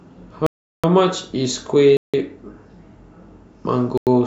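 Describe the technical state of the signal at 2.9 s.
At 2.9 s the speech signal is intact, with no audible fault at that point.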